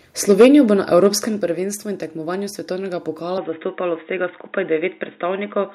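Microphone overload hits this speech recording at 0.29–0.47 s, peaking about 7 dB past the converter's limit with roughly a tenth of samples flattened, and again briefly at 1.05–1.07 s, about 2 dB over. The likely cause is an input set too hot, leaving crackling, squared-off peaks. Microphone volume steps down at 0.42 s by about 2 dB and at 1.41 s by about 5 dB, each an abrupt drop in level, likely from call software cutting the device gain. From 3.38 s to the end, the input switches to a poorer device with no gap and little change in level. The speech turns dull and boxy, and a new noise floor sits roughly 45 dB down, likely from a different microphone or headset profile taking over.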